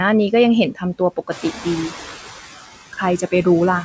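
Throughout the clip, noise suppressor artifacts appear: the suppressor lowers steady background noise by about 12 dB frame by frame, so the noise sinks between words and rises under them.

From 0.75 to 1.66 s, the noise suppressor cuts speech, mistaking parts of it for noise. Soft sounds drop by up to about 15 dB, roughly a third of a second in all, and come across swallowed or faint.

From 1.31 to 2.15 s, the noise suppressor is catching up. The room noise jumps by about 11 dB around 1.5 s, and the noise estimate takes 840 ms to follow. The louder noise first comes through with less reduction, then sinks by about 11 dB as the suppressor adapts. Throughout, the call path removes everything above 8 kHz, which fits a wideband call codec.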